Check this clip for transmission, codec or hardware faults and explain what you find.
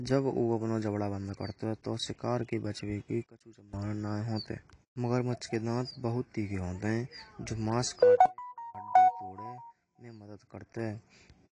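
Two kinds of fault are audible in this speech clip.

AAC compression runs throughout. Nothing remains above 10.2 kHz, and the codec damage is plainly audible. This is likely AAC-LC at a bitrate around 32 kbps.

A sudden gain jump occurs twice. Level drops about 22 dB from 3.24 to 3.73 s, then about 24 dB from 8.26 to 8.75 s. Speech and background fall together. The likely cause is a gain step applied without a ramp.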